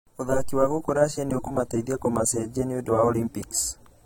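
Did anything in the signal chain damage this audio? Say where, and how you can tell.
Yes, at the codec stage. Throughout the speech, low-bitrate audio saved at a high bitrate is likely: a roughly 32 kbit/s AAC file re-encoded as MP3 keeps its coding artefacts, though content reaches 19.3 kHz.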